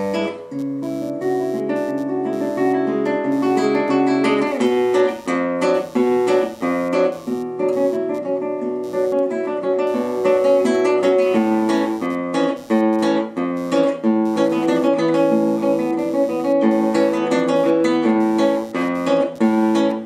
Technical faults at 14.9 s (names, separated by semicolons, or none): computer activity noise